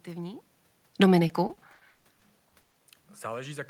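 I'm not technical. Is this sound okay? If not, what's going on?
No. From 1.27 to 2.73 s there is repeated packet loss, which gives a robotic sound. Bits of speech keep dropping out, up to 160 ms each. The gaps are patched with stretched sound, about a third of that stretch.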